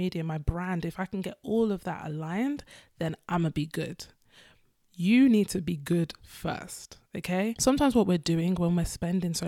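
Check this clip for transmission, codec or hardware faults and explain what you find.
No transmission, codec or hardware faults can be heard anywhere in this speech recording.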